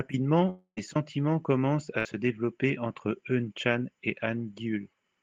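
A speech clip with two gaps where audio failed to arrive. From 0.49 to 0.79 s the sound stops moving forward. The last sound is stretched into a buzz or hiss that fades away, then a short stretch of near silence follows. About 0.28 s of speech is simply gone when the audio resumes. This is likely a long network dropout. The receiver had nothing to play and filled the hole by extending what it last had, then gave up. A second, shorter break comes at 1.99 to 2.07 s. Here the sound again freezes into a held buzz or fading hiss. It lasts about 60 ms. The speech then picks up further along, with that slice missing. This is a burst of packet loss. A few packets in a row were lost or arrived too late, and the receiver concealed the gap by continuing and lowering the previous sound.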